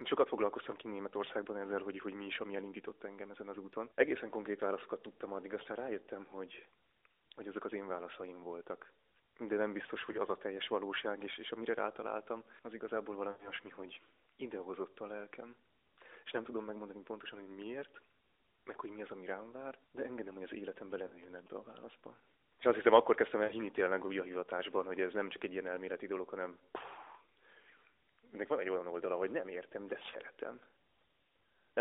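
Lost AMR speech frames break up this mobile-call speech recording at 10.12 to 10.18 s, 13.32 to 13.50 s, 21.08 to 21.28 s, 23.44 to 23.53 s and 30.12 to 30.16 s. Corrupted radio frames failed their checksum, so the decoder kept repeating the last good pitch and vocal-tract settings at falling gain. The single 20 ms gaps at 10.12 and 30.12 s come through as brief dips or warbles. The 80 ms gap at 13.32 s smears the sound and fades it toward silence, and the voice returns thin and rough. GSM signalling bursts run from 20.29 to 21.72 s as a galloping dit-dit-dit of short 217 Hz buzzes, at around 25 dB below the speech. A nearby 2G phone was sending short groups of signalling bursts, and the audio circuitry rectified them. The 40 ms frame loss at 21.08 s falls inside this buzz. The AMR narrowband codec confines everything to roughly 300 Hz to 3.7 kHz with only light coding roughness, which fits a 12.2 kbps mode.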